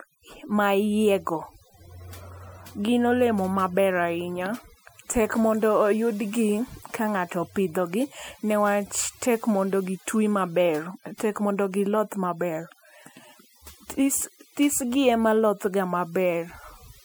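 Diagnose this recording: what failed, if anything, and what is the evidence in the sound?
Overdone noise removal runs through the whole speech recording, at the call-processing stage. Between phrases the background drops to near silence, broken only by twinkling specks. The suppressor was set too aggressively: any frequency band whose level sits close to its noise estimate gets pulled far down or shut off. The quieter parts of the voice fall inside that range and are removed along with the noise.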